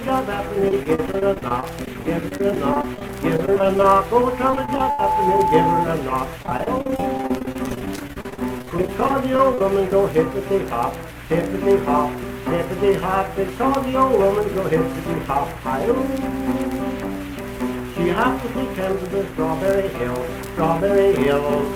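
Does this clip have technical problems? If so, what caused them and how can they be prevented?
Yes. Repeated packet loss (robotic sound) runs from 0.68 to 4.01 s, again from 4.51 to 5.00 s, and from 6.43 to 9.61 s. In each stretch the audio keeps breaking into short holes, dozens of them in the longer spans, each patched by stretching the last bit of sound. That makes it choppy. The gaps mostly last a few tens of milliseconds, with one reaching 81 ms, and about a sixth to a third of each span is filled in. A steadier network link, or a larger jitter buffer, would prevent it.

A loudspeaker feedback squeal sounds from 4.20 to 5.87 s. It is a single tone at 870 Hz that swells over roughly three quarters of a second until it sits a few decibels above the sound itself. The microphone was picking up the loudspeaker it fed, and at that frequency the loop gain climbed past one. Turning the loudspeaker down, moving it away from the microphone, or notching 870 Hz would stop it.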